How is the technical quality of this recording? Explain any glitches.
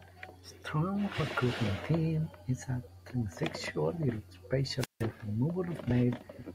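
One glitch stands out, a wireless microphone squelch dropout from 4.78 to 5.04 s. A brief rise of hiss gives way to a 169 ms hole of near silence before the speech returns. The analogue FM radio signal faded, so the receiver's squelch muted the output.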